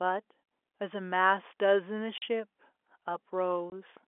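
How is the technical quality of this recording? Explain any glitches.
The recording has two short dropouts, heard against the narrow telephone band of G.711 telephone coding, which caps the sound near 3.4 kHz.

Packet loss filled with silence occurs from 2.18 to 2.22 s (40 ms) and again from 3.70 to 3.72 s (20 ms). The receiver lost audio packets and played silence in their place. The lengths point to 20 ms packets, with two missing in a row at the first event and one at the second. Each gap cuts the speech abruptly at its hard edges. On a waveform the signal drops straight to a flat line. On a spectrogram it shows as a clean vertical blank stripe.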